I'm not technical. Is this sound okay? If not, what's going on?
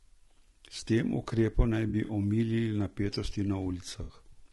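No. Low-delay AAC compression, running through the whole clip, gives the speech a rough, grainy edge. This is likely the kind of compression used for video calls, which cuts the sound into very short slices so it can travel with little delay. With so little data to spend, the fine structure of a voice is captured poorly, so a hiss-like fuzz creeps in between the tones, and the highest sounds come out dulled or slightly artificial.

AAC frame loss with concealment occurs from 1.89 to 2.11 s, just after "tem ukrepom naj" and just before "omilili napetosti", and again from 4.03 to 4.13 s, right after "omilili napetosti". Small pieces of the compressed audio went missing, and the player patched each gap by guessing from the sound just before it. This produces a brief smeared, noisy or watery patch. In the first spot, the missing pieces are scattered over about a fifth of a second.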